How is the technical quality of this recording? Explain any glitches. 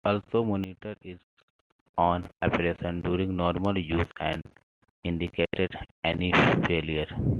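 The recording has one clear glitch. From 0.64 to 1.49 s, just before "own operation during normal", the speech and its background noise abruptly drop about 10 dB together and then jump back: a sudden gain jump, likely a digital gain setting applied instantly without a ramp.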